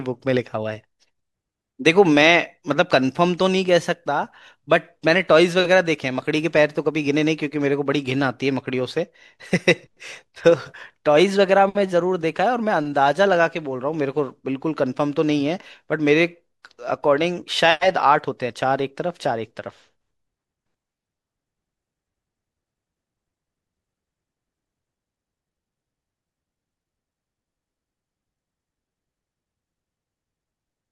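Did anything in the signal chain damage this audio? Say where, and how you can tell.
No, nothing along the way from capture to playback seems to have left a mark on this recording.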